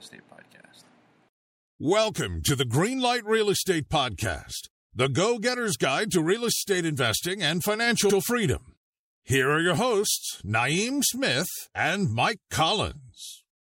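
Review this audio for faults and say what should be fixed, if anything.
Repeated frames: compressed frames were sent or written more than once, so the decoder replays them. At 6.55–6.60 s a 26.1 ms block, likely one frame, plays twice more. At 8.09–8.17 s a 78.4 ms block repeats once. Each is heard as a stutter. Checking frame sequence numbers and discarding duplicates before decoding prevents this.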